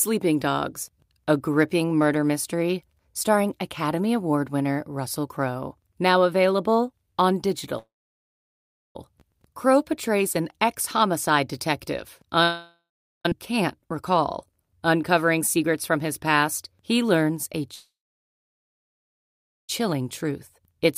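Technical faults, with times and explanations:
7.78–8.96 s, 12.43–13.26 s and 17.74–19.70 s, call audio freeze: The sound stalls after "available on" and after "past he learns a", and again at 12.43 s. Each stall begins as a brief buzzy continuation of the last sound, which dies to near-silence for about 1.07 s, 0.42 s and 1.78 s. Speech then resumes exactly where it stopped, adding 1.17 s, 0.82 s and 1.94 s of delay with nothing lost. The likely cause is delayed packets draining the jitter buffer. On a spectrogram each stall shows a short smeared band that fades into a blank column, and on the waveform a tapering stretch then a flat line.
13.32 s, skip ahead: Right after "an ex homicide detective" playback jumps forward. Roughly two seconds of speech are gone, and the two sides are butted together with no audible gap. This happens when queued audio is discarded. The spectrogram shows an abrupt vertical seam where formant patterns change discontinuously. 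The waveform shows a sudden envelope change with no silent stretch between the two sides.
19.92–20.85 s, jitter buffer speed-up: Just after the last freeze, speech runs at about 107% speed with its pitch unchanged, sounding slightly hurried. The buffer was holding more audio than its target, so the receiver trimmed short pitch-period-sized pieces many times in a row, roughly 70 ms in total, to cut the delay. On a spectrogram the syllables and harmonics look slightly compressed in time, with no shift in frequency. The waveform shows normally spaced periods with tiny splice points.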